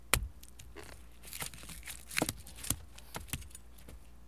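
No technical faults are audible anywhere in the recording.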